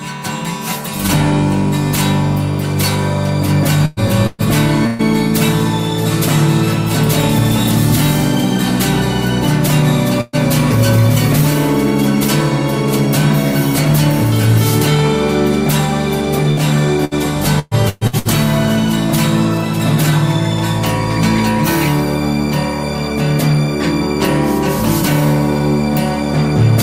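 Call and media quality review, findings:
Burst of packet loss, six hits: 3.85–4.00, 4.27–4.42, 4.87–5.02, 10.21–10.36, 16.51–16.60, 17.05–17.14 s. Each one's a short held buzz or fading hiss, then the audio jumps ahead. The first four drop about 120 ms, the last two about 60 ms. Receiver-side concealment is stretching the last good sound over the hole, so nothing goes silent, but that chunk is gone.

Repeated packet loss (robotic sound), 17.59–18.28 s: choppy through this stretch. There are four gaps in under 0.7 s, the longest 120 ms, with about 360 ms missing in total. Roughly half the span is concealment rather than real audio. The receiver patches each hole by extending the last sound, and the next hole lands before it recovers, hence the robotic texture. It follows the 17.05 s burst.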